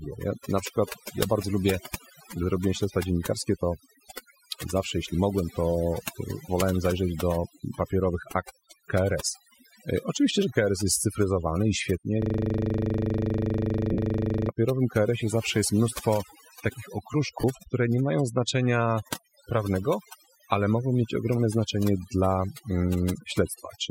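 All through the speech the background drops to near silence scattered with twinkling specks. This is overdone noise removal: the noise reduction was set so hard that frequency bands near its noise estimate were pulled down or cut, taking quiet parts of the voice with them.

From 12.22 to 14.49 s the sound locks into a machine-gun stutter at 25 Hz as one 40 ms piece of audio repeats exactly, 57 times. This is a system hang loop: the computer or driver stalled while the sound hardware kept replaying the same ring buffer, which fits a buffer of about 40 ms.

Lost LE Audio frames turn the sound into a brief noisy smear in two places. The first, from 13.92 to 13.98 s, comes after "jest cyfryzowany i świetnie" and lies inside the looping stretch. It lasts 52.5 ms, which fits seven 7.5 ms LC3 frames. The second, from 17.41 to 17.44 s, falls between "zawsze jest mnóstwo takich" and "które nie mają znaczenia". 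It lasts 22.5 ms, which fits three frames. In each gap the decoder filled in by reusing the last spectrum with random signs, so the tone content gives way to noise.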